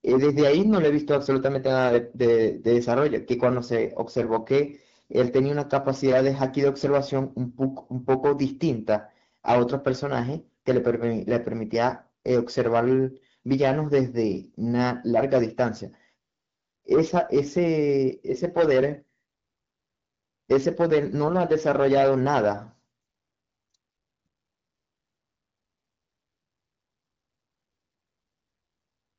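No faults found in the speech; the AMR wideband (HD Voice) path at 12.65 kbit/s is operating normally, with the expected band limit near 7 kHz.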